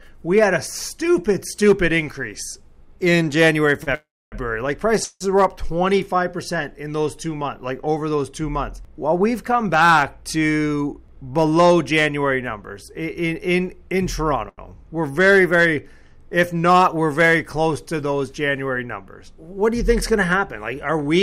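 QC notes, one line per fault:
3.83–3.90 s, short stall from a late packet: the sound gets held about 31 ms too long with a faint buzz while the receiver waits, then carries on with nothing missing.
3.95–4.35 s, call audio freeze: the last sound smears into a fading buzz, then about 260 ms of silence. The likely cause is a packet hold-up draining the jitter buffer. It picks up where it stopped, so there's a 374 ms gap inserted rather than anything lost.
5.04–5.24 s, call audio freeze: a shorter repeat, with a 166 ms stretch of fading buzz ending in about 30 ms of silence before the audio resumes in place.
10.66–11.24 s, jitter buffer speed-up: the audio runs at 114% with pitch unchanged, sounding rushed. Tiny pitch-period slices totalling roughly a tenth of a second get trimmed to shrink the backlog.
14.49–14.61 s, short stall from a late packet: a 91 ms hold on the current sound with a slight buzzy dip, then it continues from the same point with nothing lost.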